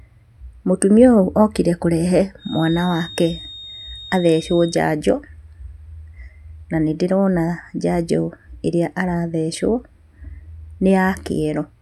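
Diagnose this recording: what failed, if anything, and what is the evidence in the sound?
A feedback whistle, most likely from an acoustic loop between a loudspeaker and the microphone held just at the edge of instability, so one frequency keeps recirculating without building up. Right after "okire kũrehe", from 2.36 s to 4.83 s, a thin, steady tone near 3.7 kHz sits behind the speech at roughly 20 dB below it, swelling and fading slowly in level, then stops. It is a single sustained pitch rather than a howl that escalates.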